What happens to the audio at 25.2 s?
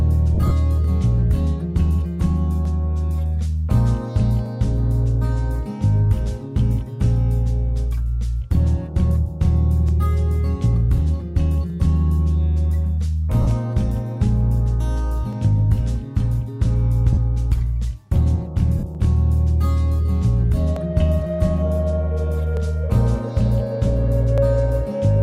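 Nothing goes wrong at 25.2 s; the audio runs through that moment intact, with no dropout, click or other fault.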